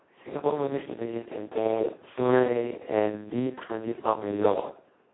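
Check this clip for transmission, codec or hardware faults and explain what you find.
There's one fault, and it runs the whole length: Speex codec damage. The excitation is starved of bits, which fits a bitrate of roughly 2 kbps, so the speech comes out hoarse and robotic, band-limited to about 250 Hz–3.4 kHz with nothing above 3.8 kHz.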